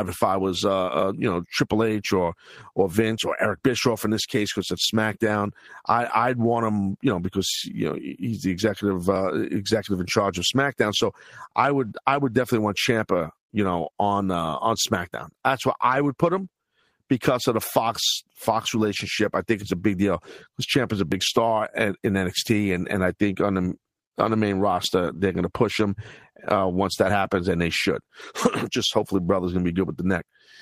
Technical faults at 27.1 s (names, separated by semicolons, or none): audio missing between chunks